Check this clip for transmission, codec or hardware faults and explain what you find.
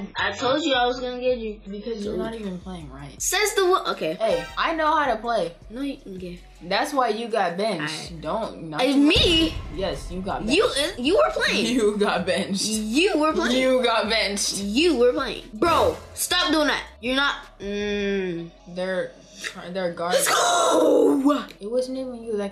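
One transmission fault appears at the very start. From 0.0 to 2.0 s, the adaptive stream starts at a low bitrate: the player opens on a lean encoding before measuring the connection. Nothing sounds above 7.5 kHz, which fits a low-bitrate AAC stream of about 12 kbit/s, until quality jumps without a gap.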